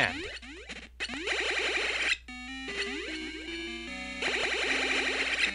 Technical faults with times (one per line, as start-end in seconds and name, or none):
1.14-1.16 loud pop
4.28-4.46 loud pop